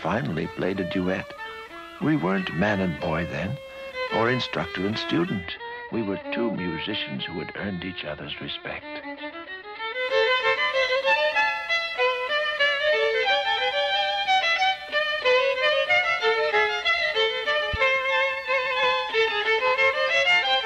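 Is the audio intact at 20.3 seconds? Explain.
Yes, the audio is intact at 20.3 seconds, with no dropout, click, distortion or other fault at that point.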